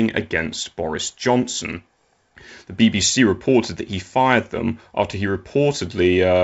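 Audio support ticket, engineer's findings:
No faults found on listen-back; speech is carried over a G.722 wideband path at 64 kbit/s, with coding damage faint at most.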